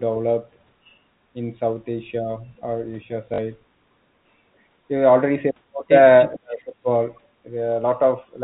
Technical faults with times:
3.34-3.38 packet loss with last packet repeated
6.35-6.88 speech suppressed in double talk
6.51-6.63 echo leak

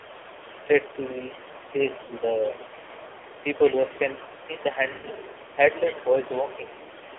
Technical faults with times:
0.00-7.18 AMR narrowband mobile codec
0.00-7.18 other side's voice leaking through
1.29-1.33 speech suppressed in double talk
2.04-2.14 lost AMR speech frames
4.47-4.79 speech suppressed in double talk
4.92-5.08 lost AMR speech frames

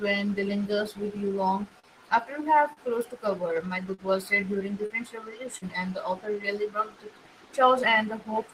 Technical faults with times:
1.79-1.87 short stall from a late packet
2.73-2.80 short stall from a late packet
2.79-3.19 jitter buffer speed-up
3.94-4.01 short concealed packet loss
4.86-4.93 short concealed packet loss
5.58-5.65 short concealed packet loss

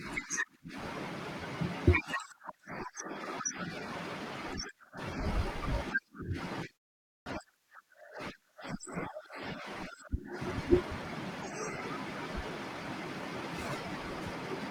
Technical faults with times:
7.17-7.26 clipped start after a pause

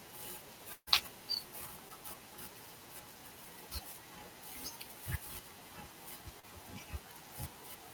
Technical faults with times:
0.73-0.89 burst of packet loss
1.89-1.92 short concealed packet loss
6.40-6.46 short concealed packet loss

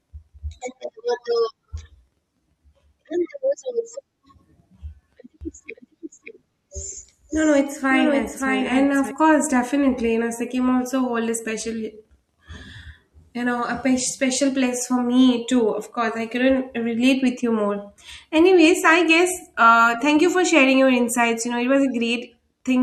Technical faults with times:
5.41-9.11 doubled audio track

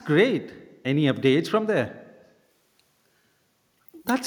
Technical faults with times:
none

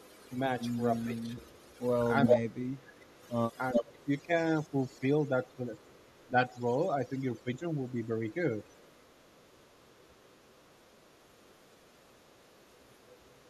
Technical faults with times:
0.00-13.50 overdone noise removal
0.00-4.04 echo leak
1.06-8.36 speech suppressed in double talk
5.48-6.24 echo leak
7.89-13.49 echo leak
11.18-11.52 background gated by the echo canceller
13.20-13.50 background gated by the echo canceller

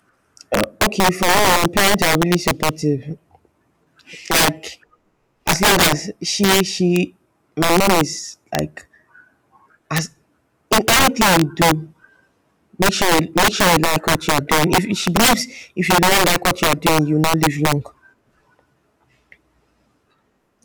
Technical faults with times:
0.00-20.64 integer overflow

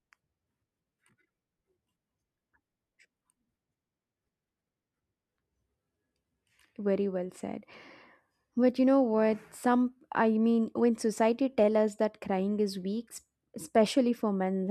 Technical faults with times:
none

